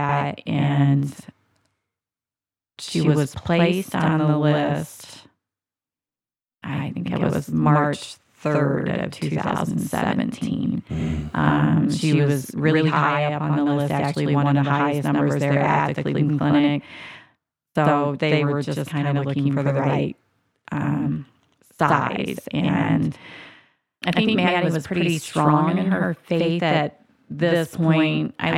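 One channel runs late by about 92.9 ms, which fits a 4096-sample buffer, and both channels are then summed to mono. This channel delay (doubling) persists throughout the speech, so every syllable is followed by an equally loud copy, heard as a slap echo.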